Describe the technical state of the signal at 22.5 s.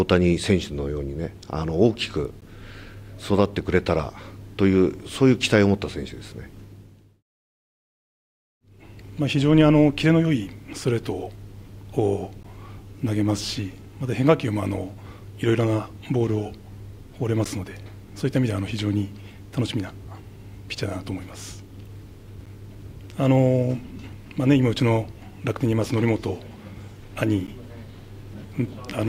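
At 22.46 s there is a gap between chunks: a 12 ms hole of silence with hard edges on both sides. The audio seems to have been handled in blocks, which fits a 5-second chunk length. Unlike a dropout, where part of the signal is removed, nothing is lost here. The sound resumes exactly where it stopped, only pushed 12 ms later.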